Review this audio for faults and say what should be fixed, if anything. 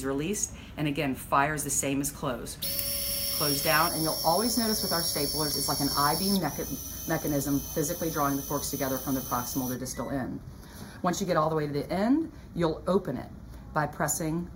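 Channel delay (comb filtering) from 3.88 s to the end. One channel lags about 0.2 ms. The mono sum notches near 3 kHz, sounding hollow. Align channels before summing to mono.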